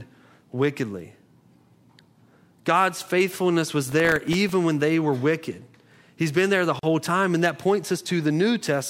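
From 3.89 to 4.49 s the speech carries processor overload crackle. The processor fell behind and missed about 15 deadlines for very short buffers, each under a millisecond. Each miss replayed a sliver of old audio with hard edges. Unlike a single dropout, this is a scattered gritty tearing laid over the sound, and it stops once the load eases.

At 6.79 to 6.83 s a gap at a join of encoded pieces opens, a silence of about 39 ms. Two separately encoded pieces were joined without trimming the encoder's start delay and end padding. It differs from a dropout because the speech resumes exactly where it stopped, with no audio missing, and the codec softens the edges of the hole.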